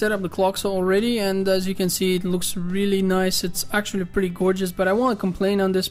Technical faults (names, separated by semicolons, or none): none